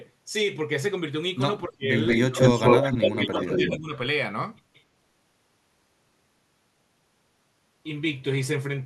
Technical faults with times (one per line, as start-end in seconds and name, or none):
1.67-1.91 speech suppressed in double talk
2.06-2.94 echo leak
2.24-2.37 speech suppressed in double talk
2.71-3.94 speech suppressed in double talk
3.19-3.77 echo leak
4.74-4.83 echo leak